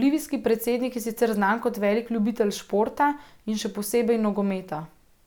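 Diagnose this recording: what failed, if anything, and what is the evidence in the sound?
Nothing failed: no fault is audible in the speech.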